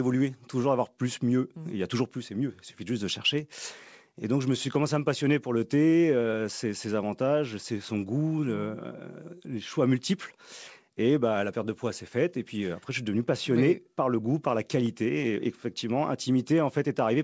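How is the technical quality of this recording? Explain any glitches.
No glitches to explain: the speech arrives over a call path with nothing above 8 kHz, which points to a wideband codec such as G.722, and that band limit, along with the codec's usual coding noise, is the only mark the path leaves.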